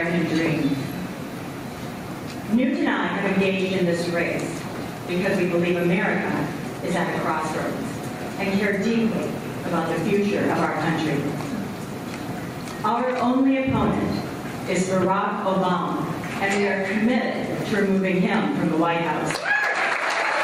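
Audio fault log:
Throughout, gain pumping: the level keeps breathing, with a swing of around 20 dB. The likely cause is input gain set far too high, with a fast limiter or compressor clamping down on each peak. On a waveform the envelope looks flattened, with peaks squashed to a similar height. A spectrogram shows the noise floor brightening between events and darkening under them.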